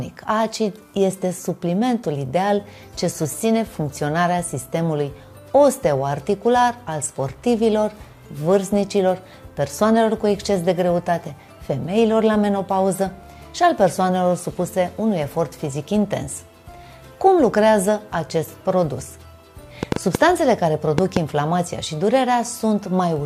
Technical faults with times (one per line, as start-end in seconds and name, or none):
19.83-21.18 train of clicks